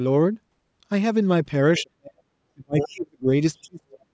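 This is a speech clip with repeated speech suppressed in double talk: the talker's level collapses by around 35 to 40 dB from 1.79 to 2.31 s, 2.54 to 3.30 s, and 3.62 s to the end, with the voice dipping and breaking up in pieces. The likely cause is an echo canceller that could not separate the near talker from loudspeaker echo and attenuated both. The other side's voice leaking through also appears as short scraps at 1.77 to 1.82 s, well below the speech level, and at 2.79 to 2.88 s, nearly as loud as the speech. Those scraps are likely residual far-end echo that the same canceller failed to remove from the microphone signal.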